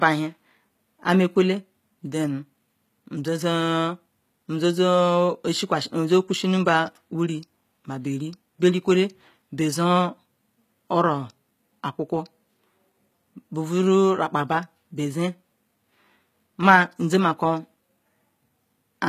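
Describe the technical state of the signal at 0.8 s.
At 0.8 s, as across the whole clip, sibilants sound gritty and metallic with nothing above 14.9 kHz, likely from HE-AAC compression around 20 kbps replicating the treble from lower bands.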